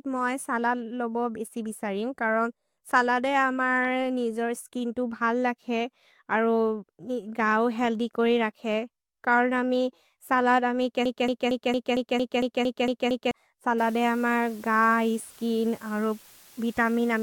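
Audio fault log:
11.06–13.31 s, broken-record loop: a slice of the speech about 228 ms long repeats exactly, back to back, ten times, so the same sliver plays again and again instead of the speech moving forward. The speech that should have filled those two and a quarter seconds is simply gone. This most likely comes from a stalled player or stream re-sending the last fragment it held. Unlike an echo or a flutter, each repeat is identical and at full level, with no decay and no overlap between copies.
13.78–17.23 s, low bit depth with dither: from here to the end, the signal is carried on what sounds like just 8 bits, with dither added before rounding, so the rounding error becomes a steady, even hiss only about 25 dB below the speech. The dither keeps the hiss clean. Without it, the same coarse rounding would give a gritty, buzzing distortion that follows the speech and drops out in the pauses, whereas this noise stays constant and evenly spread whether or not anyone is talking.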